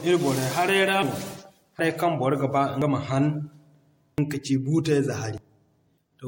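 From the start, the speech carries generation loss. It was likely encoded and decoded about five times, in a way that fits MP3 at 64 kbit/s. Each pass requantised on a shifted frame grid, so noise and spectral gaps built up. The sound is swirly, smeared and hollow, and consonant attacks blur.

At 1.02, 1.79, 2.82, 4.18 and 5.38 s, dropped buffers (overrun) break in. The likely cause is samples not being collected before the hardware overwrote them. Around a tenth of a second vanishes each time, and the two sides butt together with no silence. Each drop is heard as a jump forward. The one at 4.18 s comes just before "ka ci".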